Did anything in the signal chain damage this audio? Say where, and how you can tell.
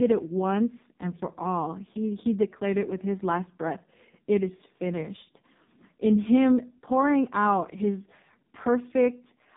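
Yes, at the codec stage: AMR narrowband mobile codec throughout. The spectrogram shows a flat ceiling at 3.8 kHz, and the heavily buzzy, synthetic speech points to a very low-bitrate mode near 5 kbps.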